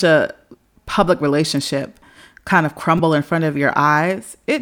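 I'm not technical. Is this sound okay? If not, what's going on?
No. Damaged data in a compressed stream causes brief glitches at 0.65 s, just before "public relationship kind of", and from 2.98 to 3.00 s, just before "in front of." At each point the decoder misreads corrupted data, producing a short glitch.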